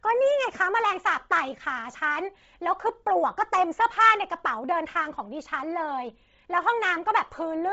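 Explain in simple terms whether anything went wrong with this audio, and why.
Yes. The speech sounds breathy and grainy for the whole clip, and nothing comes through above about 7.8 kHz. The likely cause is Bluetooth LC3 compression, squeezed hard. It drops the upper sounds and fills that gap with hiss.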